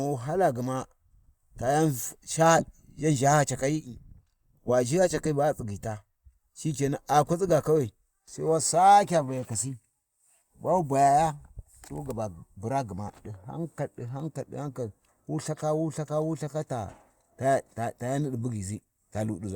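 Speech, and nothing is technically wrong with it.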